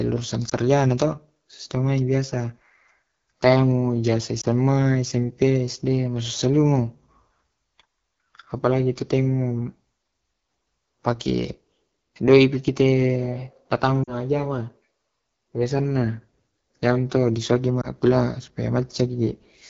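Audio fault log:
throughout, AMR wideband (HD Voice) codec: The speech has a plainly audible rough, raspy edge. It's coded up to 6.4 kHz through a pulse-driven vocal tract model, and the band from 6.4 to 7 kHz is filled with shaped noise. At this low end of the codec's range the excitation pulses are coarse, so there's grit in the voice and a hissy top. That fits the 8.85 kbit/s mode.
0.49–0.54 s, 4.41–4.46 s, 14.04–14.14 s, 17.81–17.88 s, lost AMR speech frames: The first, second and fourth are each a short dip or warble, and the one at 14.04 s drops to near silence. The first lands just before "to sitemai biasa" and the second just after "mu jasa". The decoder fills the gap by reusing the last good pitch and vocal tract settings with falling gain, so the sound smears briefly and then recovers a bit rough. The first, second and fourth fit a single lost 20 ms frame each. The one at 14.04 s is longer and fits two frames in a row.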